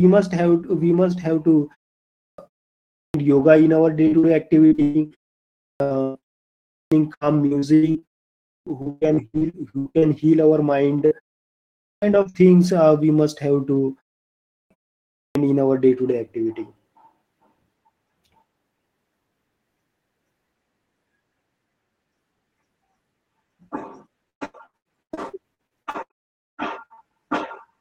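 Right after "must have to", the next word bursts out of silence with its opening sound gone. This clipped start after a pause recurs at 1.98, 2.75, 5.42, 6.54, 8.3, 11.61, 14.3 and 15.01 s. Each follows a gap of about 0.3 to 0.5 s, long enough for the output device to go idle. Roughly 0.34 to 0.41 s is swallowed while it wakes.

At 4.07 to 4.17 s, a burst of packet loss leaves a held, fading continuation of the last sound. Then the speech jumps ahead past the missing stretch. The receiver stretched the previous audio across the gap and turned it down.

Immediately after, at 4.19 to 4.26 s, a brief smear marks short concealed packet loss. About 40 ms never arrived in time, and the decoder patched the hole by extending the preceding sound before blending back.

Three stretches turn choppy: 4.67 to 10.05 s, 11.06 to 12.43 s, and 24.3 to 27.04 s. This is repeated packet loss (robotic sound). 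The gaps come in quick succession, 41, 8 and 19 of them, and the longest runs about 124 ms. Each gap is filled by continuing the last sound, so about a third of each stretch is synthesised patch rather than real audio.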